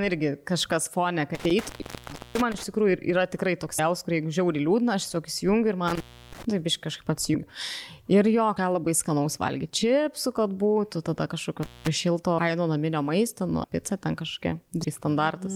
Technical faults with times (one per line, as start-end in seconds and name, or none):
1.35-2.64 intermittent contact
3.78 compressed frames skipped
5.88-6.45 intermittent contact
7.33 compressed frames skipped
8.56 compressed frames skipped
11.63-11.88 intermittent contact
12.37 compressed frames skipped
13.63 compressed frames skipped
14.83 compressed frames skipped